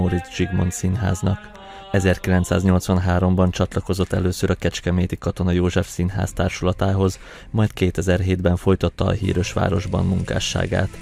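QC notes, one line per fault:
No fault to note in these QC notes.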